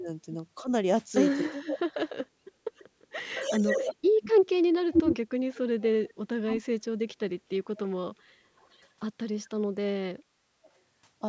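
Speech recorded through call microphone processing, with nothing above 8 kHz. The voice dips and breaks up at 0.0–2.1 s, 3.09–4.28 s, 5.39–8.09 s and 9.69–10.69 s, falling by around 30 to 40 dB. This is likely speech suppressed in double talk. An echo leak follows the voice 350 ms late, at about equal level, from 2.78 to 6.14 s. At 8.56–8.88 s it returns very faintly, about 376 ms behind. The likely cause is loudspeaker pickup the echo canceller failed to remove.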